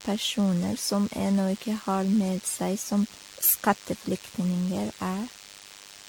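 Throughout the speech, a nearby DECT cordless phone or base station is firing radio bursts every 10 ms, which the audio circuitry rectifies. The result is DECT cordless phone buzz: a thin, steady 100 Hz buzz rich in harmonics, sitting roughly 20 dB below the speech.

Also present from start to finish is generation loss, likely from the audio being decoded and re-encoded with AAC about ten times. Each pass has laid fresh quantisation noise over the last, so the speech sounds swirly, smeared and hollow, with blurred consonant attacks, more damage than a single encode around 96 kbit/s would leave. Nothing is heard above 19.2 kHz.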